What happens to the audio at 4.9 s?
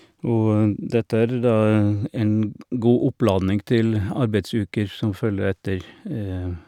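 Nothing goes wrong at 4.9 s; the speech there comes through intact, with no dropout, click or distortion.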